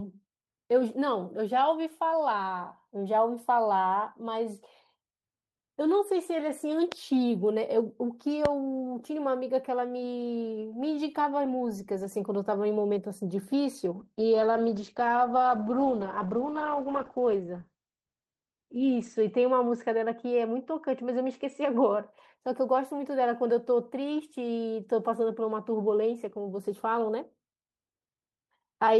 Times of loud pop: 6.92-6.94, 8.45-8.47

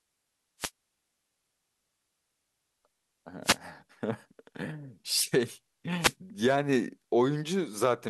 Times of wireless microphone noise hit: 0.59-0.70, 3.43-3.57, 5.99-6.14

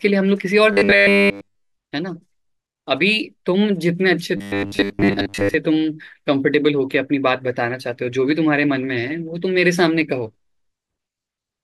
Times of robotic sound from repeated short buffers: 0.73-1.72, 4.37-5.54

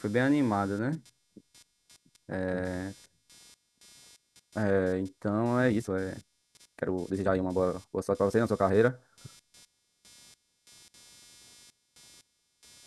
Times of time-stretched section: 5.65-8.89

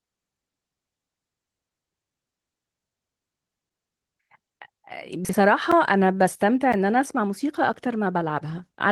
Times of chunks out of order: 5.25-5.33

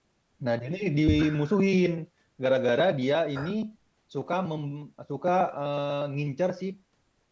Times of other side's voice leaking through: none

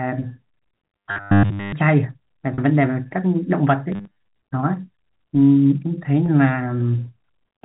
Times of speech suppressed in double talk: none

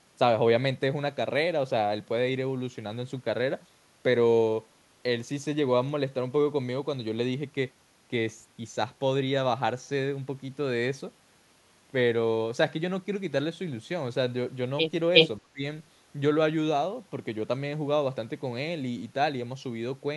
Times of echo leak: 15.14-15.28

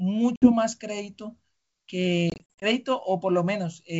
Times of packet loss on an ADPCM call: 0.36-0.52, 2.30-2.64

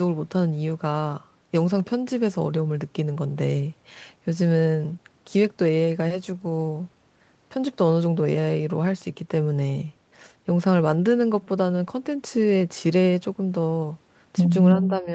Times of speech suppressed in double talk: 14.74-15.14

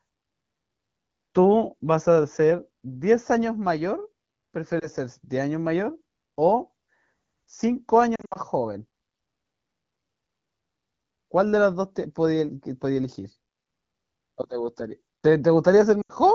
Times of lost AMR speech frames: 4.80-4.87, 8.15-8.38, 16.01-16.13

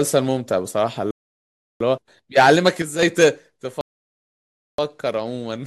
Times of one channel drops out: 2.82-3.03

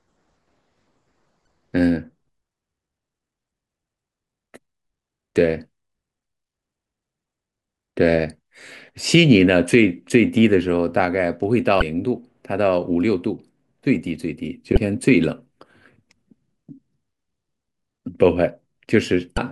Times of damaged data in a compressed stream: 1.44-1.47, 11.79-11.82, 14.74-14.77, 19.35-19.39

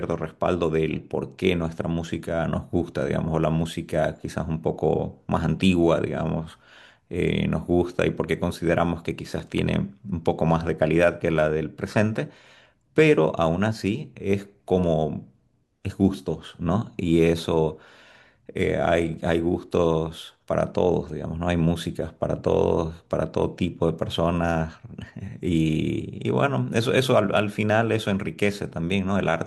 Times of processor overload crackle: 9.40-9.74

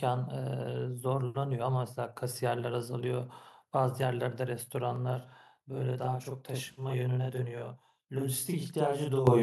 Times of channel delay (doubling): 4.96-9.42

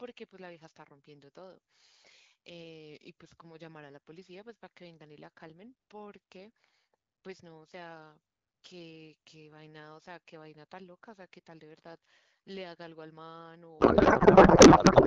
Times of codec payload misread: 13.79-15.07

